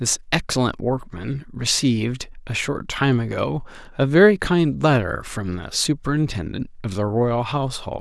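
At 2.23 s the speech shows a repeated buffer. The next block of audio did not reach the output in time, so the device replayed the block it already held, and the same 5 ms piece sounds twice in a row with a hard join at the seam. A repeat that short does not register as a stutter. It comes across as a click or brief buzz, which fits a 5 ms buffer. The late audio is effectively displaced, costing a few milliseconds of the signal.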